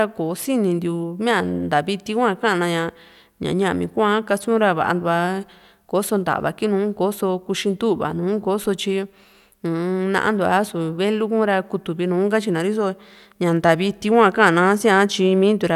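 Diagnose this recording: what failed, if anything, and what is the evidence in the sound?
No failure detected in this recording.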